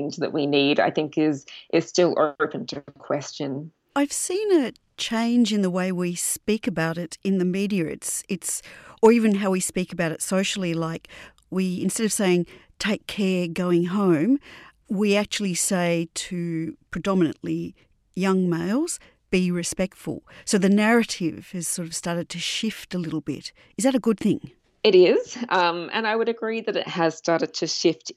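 No technical faults can be heard anywhere in the recording, and the signal stays continuous and steady throughout the speech.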